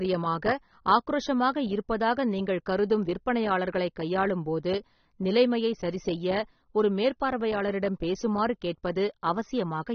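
From start to finish the speech sounds dull and smeared, with nothing above about 6.3 kHz, so sibilants lose their crispness and take on a fizzy, warbling texture. The damage is plainly audible throughout. The likely cause is AAC compression, AAC-LC at a low bitrate, consistent with something near 27 kbps. Starved of bits, the encoder drops the top of the spectrum and coarsely quantises what remains, smearing detail across each frame.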